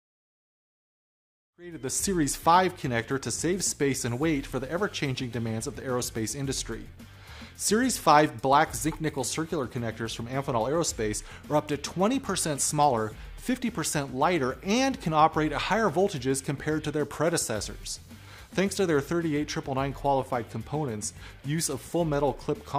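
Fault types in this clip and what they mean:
No technical faults can be heard in this recording.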